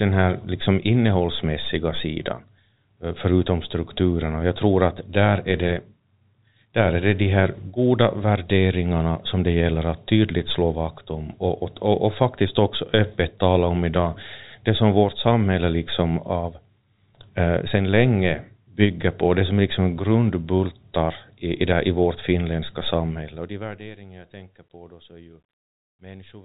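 From 23.00 to 24.08 s, after "där i vårt finländska", zipper noise: a fade of roughly 25 dB in unsmoothed 1 dB steps, about 20 per second, ticking audibly beneath the speech.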